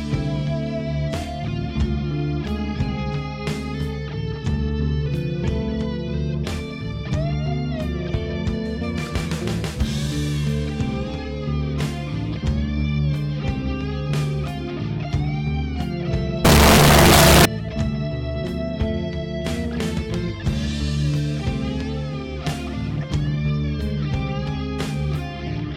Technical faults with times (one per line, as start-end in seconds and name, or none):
16.45-17.45 signed and unsigned mixed up